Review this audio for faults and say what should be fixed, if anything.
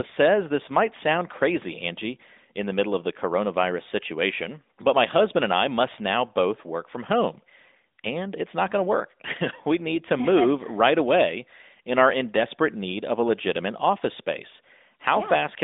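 No faults turn up in this audio, so nothing should be fixed.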